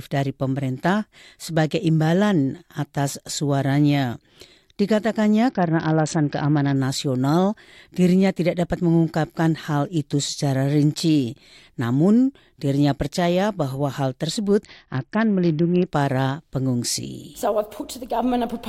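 At 5.49 to 6.76 s and again at 14.64 to 15.87 s, a Bluetooth SBC bit pool drop occurs, consistent with a fall from 31 to 7, roughly 61 kbps. Starved of bits, the encoder abandons the top sub-bands, so treble dulls and gritty quantisation noise rises until it recovers.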